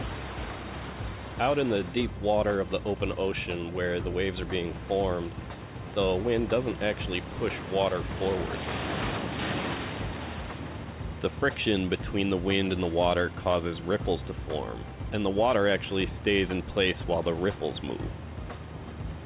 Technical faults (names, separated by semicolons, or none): none